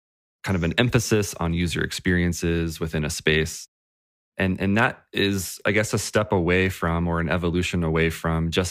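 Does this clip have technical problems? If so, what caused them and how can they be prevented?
No, there are no technical problems in this speech recording. Nothing here needs to be traced to a cause or guarded against.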